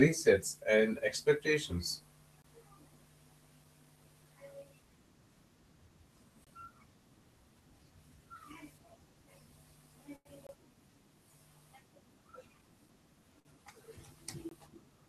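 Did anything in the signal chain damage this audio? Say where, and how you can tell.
Yes. A gap between chunks appears at the storage or playback stage: hard-edged silences of about 23 ms at 2.42 s (right after "and expectations"), 6.44 s, 10.47 s and 14.49 s, spaced about 4.0 s apart. Each chunk join leaves a silence, so the sound is interrupted without losing content.

Two short stalls from a late packet come from the network's jitter buffer: at 10.16–10.27 s the sound is held for 93 ms, and at 13.40–13.47 s for 54 ms. The buffer ran dry, the receiver stretched the last sound, then resumed without losing anything.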